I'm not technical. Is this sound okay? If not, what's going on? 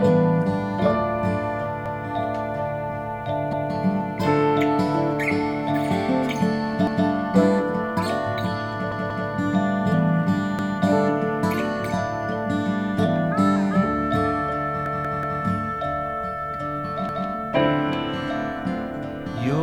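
No. A snippet about a fifth of a second long stutters with an abrupt join at 1.86, 3.53, 6.87, 8.92 (three plays), 10.59, 14.86 (four plays) and 17.09 s. This is a repeated buffer: new audio arrived late, so the player replayed its last chunk.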